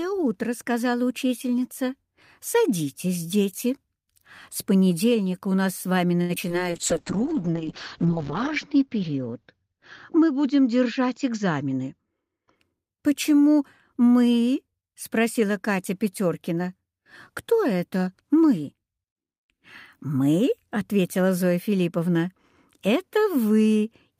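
At 6.21 s the sound holds on too long with a faint buzz or dip for about 80 ms: a short stall from a late packet, where the jitter buffer ran dry and the last sound was stretched until the packet arrived. Brief smears follow at 6.35 s and from 6.48 to 6.64 s, short concealed packet loss where about 20 ms went missing each time and was filled by extending the preceding sound. From 6.70 to 12.62 s the audio turns rough and muffled, a call bitrate drop from 48 to 6 kbps that pulled the bandwidth from 20 kHz down to 8 kHz, with the lowest rate lasting about 1.1 s. Within that stretch, from 11.24 to 12.25 s, the sound feels hurried at an unchanged pitch. This jitter buffer speed-up ran at 107% and trimmed roughly 70 ms of excess buffered delay by removing small pitch-period slices.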